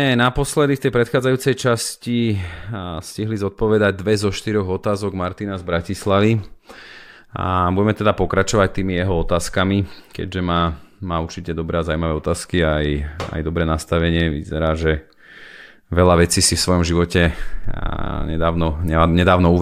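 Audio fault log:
17.64 s repeated buffer: one 5 ms piece of speech plays three times in a row, as late audio forced two replays. The repeats give a brief click-like buzz. A waveform shows identical copies with abrupt steps at each join. A spectrogram shows a thin vertical streak.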